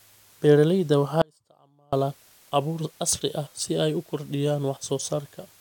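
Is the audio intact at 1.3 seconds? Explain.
No. At 1.3 s the clip sits inside an audio dropout to a faint residue, running from 1.22 to 1.93 s, about 0.71 s of lost speech. The speech stops abruptly at 1.22 s and returns just as suddenly at 1.93 s, with none of the taper of a pause or fade. What remains in the gap is only a faint trace, very roughly 35 dB under the normal speech level. The likely cause is that the wanted signal was lost upstream while the path after the break stayed live, passing along only that weak leak.

Low bit depth with dither also affects the whole clip, including this moment. The audio uses only 9 bits, and dither was added before rounding. The rounding error therefore turns into a steady white noise rather than distortion. That noise is heard as a constant, even hiss, roughly 30 dB below the speech. Inside the dropout, the hiss sits about 5 dB above the faint residue.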